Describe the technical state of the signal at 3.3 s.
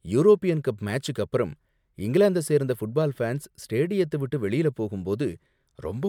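At 3.3 s the speech signal is intact, with no audible technical fault at that point.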